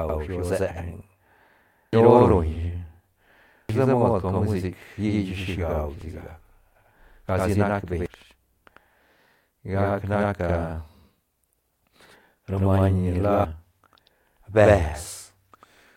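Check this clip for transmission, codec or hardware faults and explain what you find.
Two faults are present in the speech: a channel delay causing doubling that runs through the whole clip, and five short bursts of damaged data in the compressed stream.

Channel delay (doubling) is heard throughout. One channel arrives about 93 ms after the other, which fits a 4096-sample buffer, and when the two are folded to mono the late copy sits right behind the original at equal level. The result is a distinct slapback repeat of every syllable. Room reverberation would instead trail off in a decaying wash, and a comb-filter phase problem would use a much shorter offset that colours the tone without separating into an audible second copy.

Damaged data in a compressed stream appears at 1.93 s, 3.69 s, 6.01 s, 8.06 s just after "nac beñ", and 13.45 s just after "ni la". At each point corrupted bytes make the decoder misread a frame, lose sync and hunt for the next valid frame header. 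What comes out is a brief chirp, squawk, click or short hole. A plain dropout would be silence, and a hardware click would be a single sharp tick. These events instead come from the decoder's misreading.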